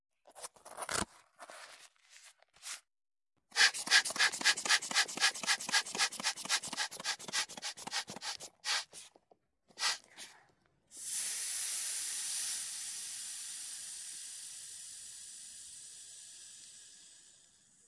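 Nothing here stands out as a technical problem; the audio runs along without any dropouts, glitches or other audible faults to point to.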